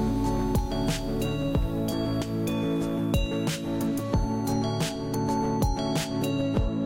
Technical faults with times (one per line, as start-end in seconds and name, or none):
5.13 compressed frames skipped